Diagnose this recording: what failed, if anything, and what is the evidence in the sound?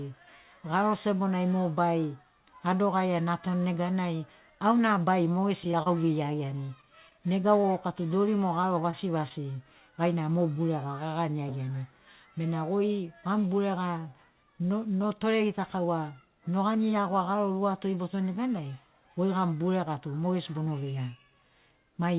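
Scattered short gaps between 5.64 and 7.66 s, in the network and jitter-buffer stage: about seven tiny holes, none longer than roughly 30 ms, each patched by continuing the preceding sound. They are spread across two seconds as brief ticks and smears, not a single event.

Short concealed packet loss at 8.62 to 8.65 s: about 20 ms of audio never reached the decoder, so the receiver extrapolated from the last sound and blended back in. Unlike a stall, real material is gone here, heard as a brief smear.

Short stalls from late packets at 8.91 to 8.95 s and 9.29 to 9.32 s: the jitter buffer ran dry, so the receiver held the last sound about 18 and 16 ms until each packet arrived. Nothing is lost; a sound is simply stretched, with a slight buzz.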